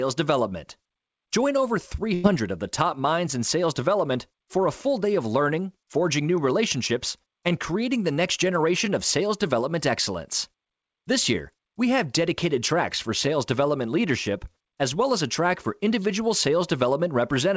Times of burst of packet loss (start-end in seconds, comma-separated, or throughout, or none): 2.14-2.26